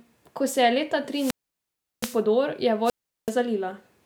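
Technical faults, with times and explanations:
1.10 to 2.23 s and 2.84 to 3.32 s, wireless microphone squelch dropout: The first begins just after "se je leta". The radio link from the microphone weakens, so hiss and static swell as the FM signal fades. The receiver's squelch then shuts the output off, leaving a hole of near silence. That mute lasts about 0.72 s in the first event and about 0.38 s in the second. The speech returns once the signal recovers.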